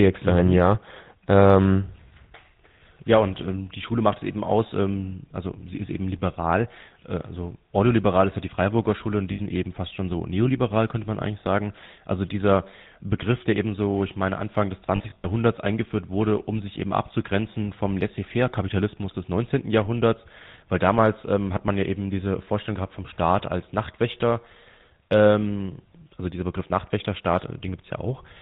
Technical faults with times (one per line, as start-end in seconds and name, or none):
0.00-28.41 GSM full-rate codec
9.32-9.40 lost GSM frames
14.96-15.26 lost GSM frames